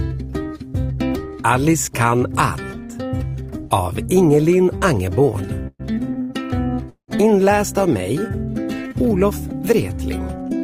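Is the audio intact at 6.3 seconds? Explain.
No. From 6.21 to 6.31 s the sound is held too long, with a slight buzz or dip. This is a short stall from a late packet: the jitter buffer ran empty, so about 79 ms was filled by stretching the last sound, then playback resumed where it stopped, nothing lost but 79 ms later.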